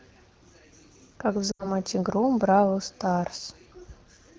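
Lost AMR speech frames disrupt this speech clip from 1.51 to 1.71 s. About 80 ms of audio goes missing, which fits four consecutive 20 ms frames failing their checksum after radio errors. The decoder fills the gap by repeating the last good pitch and vocal tract settings at falling gain, so the sound briefly smears and fades toward silence before the speech returns. It does this quickly, as expected for the wideband AMR-WB codec, whose clarity points to a rate around 12.65 kbit/s.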